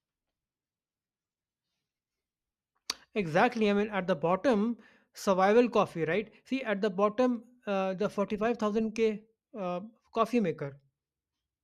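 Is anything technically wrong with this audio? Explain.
No, nothing in this speech recording stood out as a technical problem on listening.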